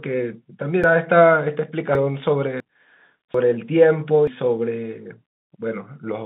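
The capture likely failed to collect its buffers in time, so dropped buffers (overruns) cut roughly 0.1 to 0.3 s of speech at 0.84, 1.95, 2.60, 3.34 and 4.27 s. Each is heard as an abrupt jump in the telephone-band sound.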